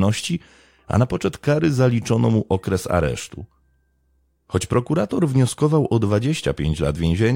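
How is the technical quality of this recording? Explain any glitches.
The recording has a recurring fault: clock slip clicks run from 0.26 s to 7.19 s, a faint regular tick about every 0.15 s through the speech, around forty in all. The likely cause is two unsynchronised clocks differing by roughly 150 ppm, each slip dropping or repeating one sample.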